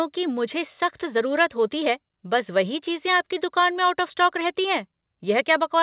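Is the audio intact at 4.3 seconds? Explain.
Yes, the speech at 4.3 seconds is intact, with no dropout, glitch or other fault at that moment.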